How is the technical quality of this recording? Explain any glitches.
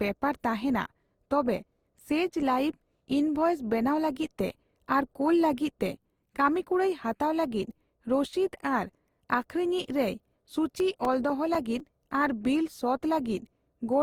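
The recording has two clear faults: a smeared, hollow texture throughout and a short run of ticks near the end.

Generation loss runs the whole length. The speech was likely encoded and decoded repeatedly, about four times, with a lossy codec that fits Opus at 48 kbit/s. Each pass requantised on a shifted frame grid, stacking noise. The result sounds swirly and hollow, with blurred attacks, despite content reaching about 20.2 kHz.

CD scratch ticks appear from 10.8 to 12.29 s. A blemish destroyed more data per disc revolution than error correction could rebuild, so the player patched the gaps. This produces seven regular ticks of uneven strength, the longest about 7 ms.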